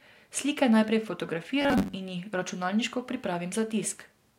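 From 1.62 to 1.95 s the speech turns into a rigid, metallic buzz pitched at 93.8 Hz. It still loosely tracks the syllables. This is robotic sound from repeated short buffers. Most of that stretch, roughly two thirds or more, is filled by replaying a chunk of about 10.7 ms while the real audio is skipped, likely because new audio was arriving too seldom. On a spectrogram this appears as evenly spaced, perfectly horizontal harmonics every 93.8 Hz. On the waveform it shows as identical cycles repeating every 10.7 ms.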